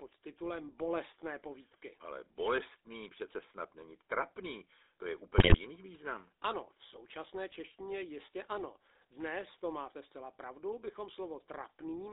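Throughout, the GSM full-rate codec models the vocal tract with sparse pulse excitation, which fits a 13 kbps coder. The speech sounds buzzy and gravelly, plainly so, and is confined to 300 Hz to 3.7 kHz.

From 5.38 to 5.57 s, GSM bit errors corrupt the decoder's filter, pitch and gain values across what sounds like about eight frames. The speech breaks into squawks, pops and gargling.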